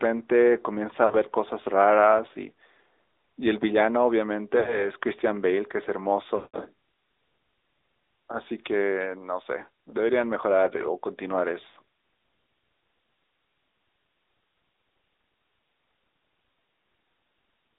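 Throughout, the speech has passed through the AMR narrowband mobile codec. The audio was sampled at 8 kHz and rebuilt from a vocal-tract model fed with sparse pulses, and the line band runs only from about 300 Hz to 3.7 kHz. The damage is plainly audible: a buzzy, synthetic edge on the voice, which fits a mid-rate mode of roughly 10 kbps.

Lost AMR speech frames occur at 1.06 to 1.28 s, 4.60 to 4.90 s, 6.36 to 6.66 s and 11.68 to 11.78 s. In each case, corrupted frames failed their check, so the decoder kept repeating its last good pitch and filter settings while lowering the gain. The short gaps of 40 ms and 60 ms come through as brief dips or warbles, and the 80 ms gap near 11.7 s sounds much the same. At 6.36 s the concealment runs for about 180 ms, long enough that the sound smears out and fades to silence before the voice returns, weak or rough for a moment.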